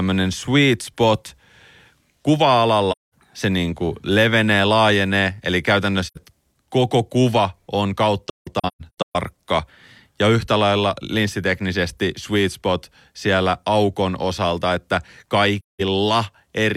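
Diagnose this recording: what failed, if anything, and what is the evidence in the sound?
The failure is at the codec stage: AAC frame loss with muting, with lost frames zeroed by the decoder. The sound drops to silence at 2.91–3.14 s, 6.06–6.18 s and 15.59–15.81 s, and several times between 8.29 and 9.16 s, where the longest hole is roughly 150 ms. Each hole fades out and back in over the overlapping transform windows, so the edges are soft. A hard dropout would have abrupt, clicking edges, and concealment would fill the gap with repeated sound instead of silence.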